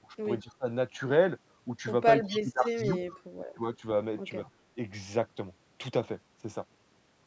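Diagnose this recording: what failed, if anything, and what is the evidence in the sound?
The call-processing echo canceller likely mistook simultaneous talk for echo, producing speech suppressed in double talk. It pulls the speech down at 0.00–0.14, 0.42–0.66, 2.30–2.97, 3.56–3.62 and 4.50–4.63 s. The deepest dips run from about 15 to about 30 dB.

The same canceller likely failed to remove all of the loudspeaker pickup, causing echo leak. A faint copy returns 215 ms late at 2.23–2.39, 2.87–2.96 and 4.45–4.50 s. It sits about 15 to 35 dB below the speech and is heard as a delayed shadow.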